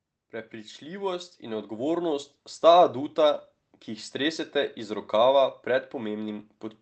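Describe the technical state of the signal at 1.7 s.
At 1.7 s the speech and the background noise are swelling together, partway through a rise of about 9 dB that runs from 0.3 to 2.37 s and settles just before "sta aduta ki jih". This is automatic gain rising: the gain control judged the input too quiet and kept raising its gain gradually.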